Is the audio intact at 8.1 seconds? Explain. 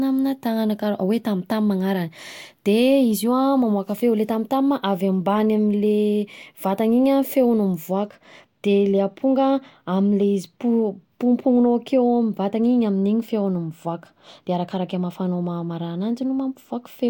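No. From 7.92 s right to the end there's channel delay (comb filtering): one side arrives a hair late, roughly a couple of samples, before the mono sum, so the first cancellation lands around 10 kHz. That just dulls the top end.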